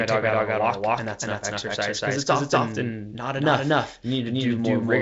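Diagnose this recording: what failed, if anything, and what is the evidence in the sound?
A doubled audio track runs through the whole clip. Every syllable of speech is followed by a clean second copy about a fifth of a second later. The copy is roughly as loud as the original. It has no decay and no room colour, so it is not an echo. It is the full signal mixed in twice. The stage is likely a second capture path or an edit that holds two copies out of step. Both copies share the G.722 band limit near 7.8 kHz.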